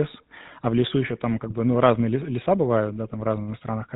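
GSM full-rate codec coloring runs from start to finish: the speech is rebuilt from a vocal-tract filter driven by sparse, regular pulses and cut off above 4 kHz, so the voice sounds buzzy and gravelly with plainly audible damage, consistent with the 13 kbps full-rate coder.

GSM bit errors strike from 1.46 to 1.53 s: corrupted filter, pitch and gain values reach the decoder, bending the spectrum and jolting the level. The speech briefly squawks and gargles over a stretch that fits roughly three codec frames.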